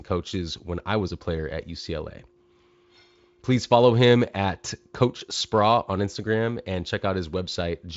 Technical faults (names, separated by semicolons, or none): none